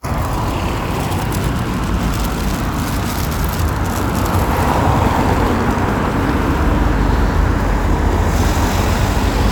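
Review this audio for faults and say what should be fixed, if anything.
Nothing here needs fixing: the everyday sound keeps a steady, intact signal path throughout, with no audible defect anywhere in the recording.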